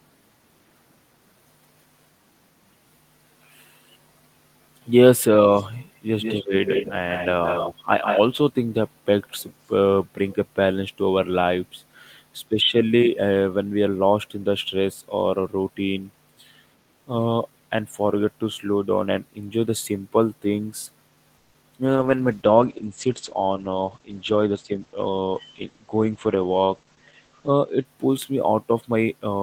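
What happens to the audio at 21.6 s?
Right around there the speech hits a call audio freeze, running from 21.37 to 21.56 s. The last sound gets stretched into a fading buzz or hiss for roughly 170 ms, then picks up exactly where it left off with nothing lost. What you hear fits the likely cause: packets held up in transit and the jitter buffer running dry, so everything after lands about 170 ms later than it would have.

Then, just after, from 21.62 to 21.65 s, there's a short concealed packet loss. About 20 ms of audio never made it to the decoder, and the receiver patched over the hole by carrying the previous sound forward before blending back into the real signal. It comes across as a quick smear or wobble right on the heels of the freeze, and whatever fell in that sliver is gone.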